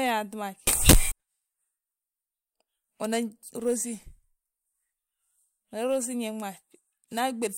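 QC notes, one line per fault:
0.67–1.12 s: samples built from the wrong bytes. The sample bytes are misassembled, so the fast-changing low bits dominate and the speech becomes loud, harsh broadband noise.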